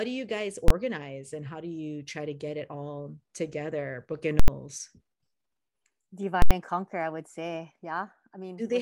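Right after "do you guys", at 0.68 to 0.70 s, there's a single hard bang: invalid numbers at full scale, where the calculation's bad values got pinned to maximum level. The same fault hits at 4.40 to 4.48 s and 6.42 to 6.51 s (just before "and conquer I would"), and those longer stretches come through as a loud pop at each end with dead quiet between. The lengths fit 1024-sample and 4096-sample processing blocks.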